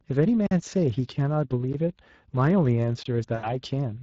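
Across the whole clip the speech has a grainy, hoarse quality, with a plainly audible noisy rasp riding on the voice. That is the Speex codec at work. This CELP coder has too few bits to describe the excitation faithfully, so the residual comes out as shaped noise rather than clean periodic buzz. The damage level is consistent with a setting of around 20 kbps.

At 0.46 s the sound drops out abruptly for about 46 ms, returning at 0.51 s. This is a block of digital silence. A chunk of output was zeroed, most likely because the output buffer was not filled in time, and the length fits a 2048-sample buffer. The audio cuts out and back with hard edges and no fade.

A second, shorter hole appears at 3.03 s. It lasts about 23 ms and ends at 3.06 s, with the same hard edges. This is another block of digital silence, and its length fits a 1024-sample buffer.

From 3.35 s to 3.55 s the voice smears into a stretched sound that weakens as it goes, then stays thin briefly after returning. 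This is VoIP packet loss concealed by the speech codec. About 80 ms of audio was missing, consistent with four lost 20 ms frames. The decoder kept repeating its last pitch and filter while lowering the gain, and because each frame builds on the one before, recovery lags.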